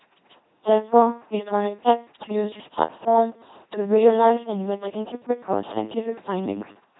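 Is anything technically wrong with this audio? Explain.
Yes, the whole speech clip has gone through an LPC-10 vocoder, and it's pretty heavily mangled. From start to finish the voice turns into that buzzy, mechanical robot sound: each moment gets rebuilt from either a pulse buzz or noise feeding a small vocal-tract filter, so voicing flips show up as odd buzz or hiss. There's also nothing above 3.9 kHz, and the overall crudeness fits a 2.4 kbit/s stream.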